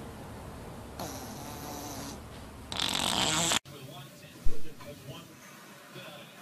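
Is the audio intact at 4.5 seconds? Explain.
No. A phantom power thump runs from 4.46 to 4.75 s. When the phantom supply is switched on a live input, the sudden DC step passes through the input's coupling capacitors and reaches the signal path as a single low-frequency pulse. It sounds like a deep thump that peaks at about -12 dBFS and falls away quickly, with a decay of about 65 ms, leaving a short low tail across the rest of that span.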